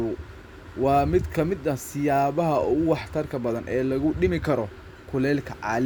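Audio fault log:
Nothing to log here, since this little speech recording came through without a single fault turning up anywhere along the way.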